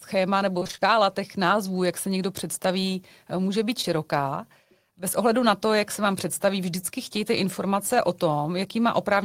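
Repeated packet loss (robotic sound) runs from 0.59 to 0.83 s, just before "těch názvů jak se": six gaps up to 25 ms, each patched by extending the previous sound, leave half that stretch synthetic, choppy and robotic. Short concealed packet loss follows at 3.81 to 3.85 s, right after "někdo představí může být": about 20 ms never arrived, and 15 ms of continued sound bridges the hole with a brief smear.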